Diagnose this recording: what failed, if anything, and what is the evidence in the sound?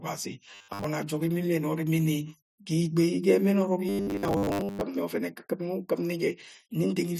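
Robotic sound from repeated short buffers at 0.54 to 0.84 s and 3.89 to 4.81 s: the speech turns into a rigid, metallic 100 Hz buzz. The likely cause is a starved driver or buffer stage looping its last 10 ms block, which replaces most of the real audio.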